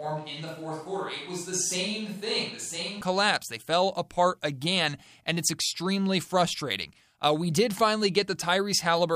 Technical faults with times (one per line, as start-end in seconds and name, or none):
0.00-3.01 switch to a distant microphone